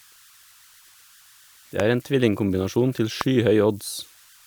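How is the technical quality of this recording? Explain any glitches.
The recording has two clear problems: a faint whistle under the whole speech, and two loud pops.

Throughout the clip a thin, steady whistle near 1.5 kHz sits under the speech, about 31 dB below it. It is easiest to hear in the pauses, with a grainy texture under the quieter syllables. These are converter idle tones. A delta-sigma converter running without dither settles into repeating bit patterns when its input is very small, and those patterns produce a tone whose pitch depends on the small offset at the input.

From 1.80 to 1.82 s, and again from 3.21 to 3.23 s, there is a single sharp loud pop. Each one peaks well above the speech, roughly 15 dB over it, and the speech continues underneath without a break. The likely cause is a sudden voltage step or spike, for example from a connector, a switch, static discharge or a driver glitch. 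The following circuitry shapes that spike into a brief, hard transient, which is why each pop sounds like a crack laid over the talking.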